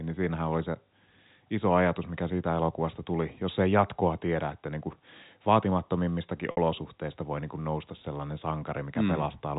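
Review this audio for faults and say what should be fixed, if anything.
At 6.51 s the network dropped packets, about 60 ms of speech (which fits two lost packets), and the receiver applied packet loss with pitch repetition. It bridged the gap by looping the last pitch period and fading it out over about 50 ms, so the sound briefly holds on a slightly buzzy, static tone before a short cross-fade brings the speech back at 6.57 s. The narrowband G.711 telephone coding around it can be heard as normal. Adding a jitter buffer and forward error correction on the link would prevent such losses from reaching the listener.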